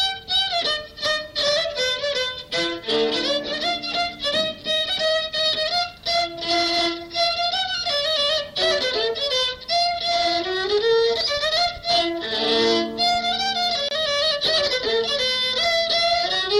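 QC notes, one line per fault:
13.89–13.91 s, gap at a join of encoded pieces: 26 ms gap, edges smeared so the silent part is shorter, sound resumes where it stopped; untrimmed encoder delay and padding left at the join.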